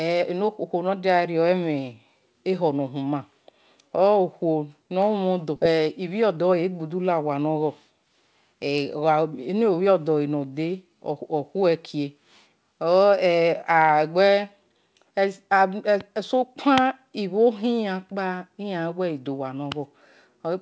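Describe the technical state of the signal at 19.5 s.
At 19.5 s the speech comes through intact, carried by a call path whose G.722 coding leaves nothing above 8 kHz.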